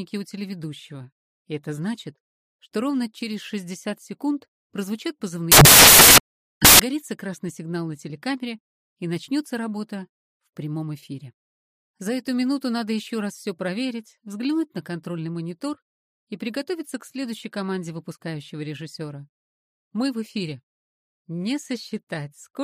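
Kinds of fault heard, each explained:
Samples built from the wrong bytes: From 5.52 to 6.80 s the reader assembles each sample's bytes wrongly, through an offset, swapped order or misalignment. The rapidly changing low bits become the large part of each value. The result is a burst of loud, harsh broadband noise.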